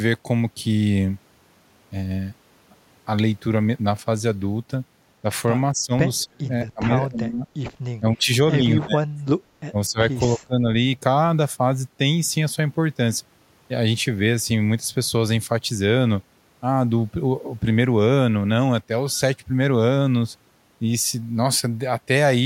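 Speech suppressed in double talk at 5.72–5.92, 6.24–6.5, 6.66–7.48, 7.99–8.29, 8.58–9.44, 9.71–9.99 and 10.26–10.67 s: the speech dips or nearly vanishes, likely an echo canceller muting it during overlapping far-end talk.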